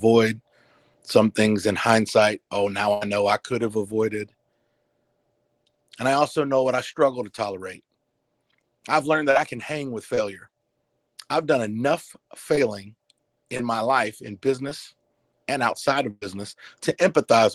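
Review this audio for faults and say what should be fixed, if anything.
Burst of packet loss occurs at 2.93–3.03 s, between "in hindsight oh now" and "know I could have", and at 16.11–16.23 s. About 80 ms and 100 ms of audio never arrived. The receiver extended the last sound and faded it, leaving a held buzz or fading hiss before the sound picks up later. The second gap includes about 10 ms of silence. To prevent this, add forward error correction with packet redundancy and prioritise the media stream so that loss runs stay short.

Short concealed packet loss appears at 9.31–9.37 s, 10.15–10.19 s (right after "I can hang with"), 12.55–12.59 s, 13.57–13.61 s and 14.69–14.73 s. Each hole is 20–40 ms. The decoder patched it by continuing the preceding pitch or noise and blending back, which is heard as a brief smear or wobble, and a short consonant may drop out. To prevent this, use an adaptive jitter buffer sized for the network's delay variation together with in-band FEC.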